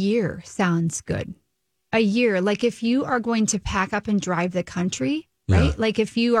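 No technical faults can be heard anywhere in this speech recording. There is nothing to place on a timeline and nothing in the sound that calls for comment.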